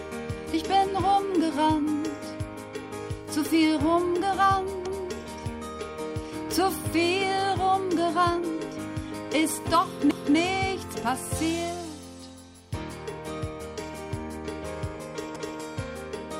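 At 4.86 s the sound stutters. A 250 ms stretch plays twice, ending at 5.11 s. The same happens from 10.11 to 10.36 s and from 15.36 to 15.61 s. These are overlapping chunks. The audio was handled in blocks of about 5 s, and each block began 250 ms before the previous one ended. So every join repeats a quarter second. This is heard as a hiccup at a steady pace.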